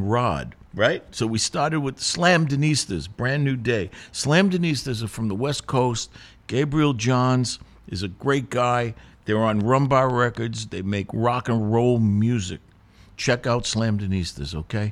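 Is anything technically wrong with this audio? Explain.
Yes. From 9.61 to 10.59 s a train of clicks appears, likely from interference or a faulty connection injecting repeated pulses. About five similar clicks arrive evenly, 4.1 per second, peaking at roughly the speech's own level, so a steady ticking cuts through the speech.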